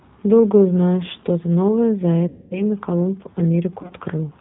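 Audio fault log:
throughout — G.729 codec: The audio is band-limited to 4 kHz with a rough, slightly synthetic grain that is plainly audible. This fits G.729A at 8 kbit/s, which resynthesises speech from a vocal-tract filter and a pitch predictor plus a few pulses per 5 ms subframe, so fine waveform detail is replaced by a modelled approximation.
2.28–2.62 s and 3.82–3.93 s — VoIP packet loss concealed by the speech codec: From 2.28 s, about 230 ms of audio is lost within this span. The decoder keeps extrapolating its last pitch and filter with falling gain, so the sound smears into a fading buzzy tone or coloured noise, and the following frames stay weak while the decoder state recovers. Around 3.82 s, about 50 ms is lost in short gaps of at most 20 ms, scattered over 80 ms.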